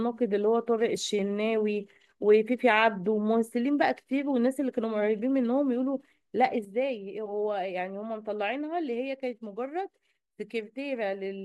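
At 6.65 s the speech and its background noise drop together by about 6 dB in a single step and stay at that lower level to the end. This sudden gain jump is likely a digital gain change applied instantly, with no ramp.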